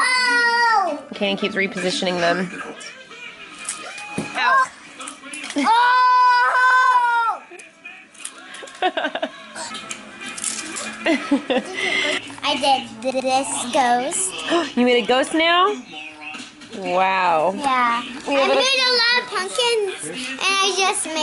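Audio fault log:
6.70–6.80 s, repeated frames: a 96 ms block of compressed audio, which fits three frames, was delivered twice, so the decoder replays it as a brief stutter adding 96 ms.
13.10–13.30 s, repeated frames: another 96 ms block, again fitting three frames, was delivered three times, so the decoder plays it twice more, a longer stutter adding 192 ms.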